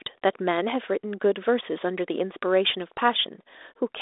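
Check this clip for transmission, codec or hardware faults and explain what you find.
No transmission, codec or hardware faults turn up; the speech sits in a telephone band of 300 Hz to 3.7 kHz with nothing above 3.8 kHz, and the slight coding texture is what a 32 kbit/s ADPCM link normally leaves behind.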